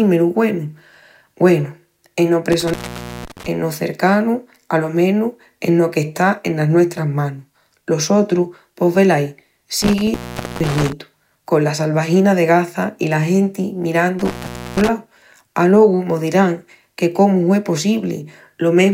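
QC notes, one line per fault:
2.52–3.46 s, intermittent contact: the speech drops out for about 0.51 s with crackle at both edges and faint hiss in the gap, just before "cercanu alo menus eno". A loose plug or cable briefly opened the signal path.
9.82–10.93 s, intermittent contact: a crackling break of about 0.46 s, after "sotru pos velaí" and before "con la salvagina de", as the faulty connection opened again.
14.19–14.89 s, intermittent contact: after "i la genti" the signal cuts for about 0.46 s, crackling on and off with hiss between, from a loose connection.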